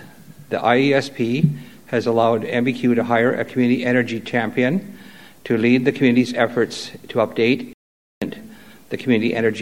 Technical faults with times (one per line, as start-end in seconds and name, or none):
7.73-8.22 playback stall